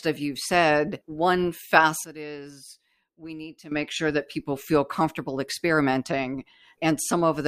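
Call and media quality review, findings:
Sudden gain jump, 2.04 to 3.72 s. Speech and background noise drop together by about 15 dB, right after "of you've said one". Level snaps back before "sure that people feel". No fade on either edge. Likely a digital gain stage or bit shift applied without a ramp, one sample to the next. Check the gain control path for unsmoothed setting changes.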